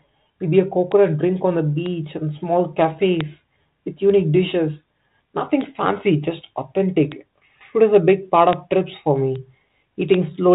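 Speech carried over a telephone-band G.726 ADPCM path, which fits 32 kbit/s, cuts everything above 4 kHz. Eight sharp, broadband bit error spikes tick through it at 0.92, 1.86 (after "drink on the"), 3.21, 5.61, 7.12, 8.53 (after "is a big part"), 9.36 and 10.14 s. Each is one to three corrupted samples, where a flipped bit throws the value by a power of two before it snaps back.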